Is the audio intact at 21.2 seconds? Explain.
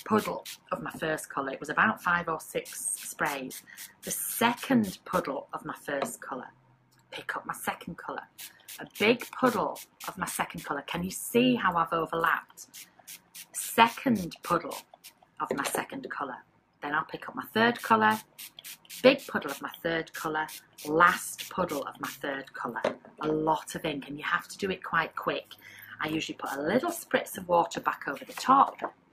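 No. At 21.2 seconds the clip shows overlap-add ripple, which runs through the whole recording. The audio was split into windowed frames and rejoined with an overlap that doesn't sum to a steady gain, so the level dips and swells about 6 dB once per frame, at around 100 Hz. At that rate it sounds like a metallic buzz with extra tones around the sound. Unlike mains hum, it rides on the signal itself and disappears in silence.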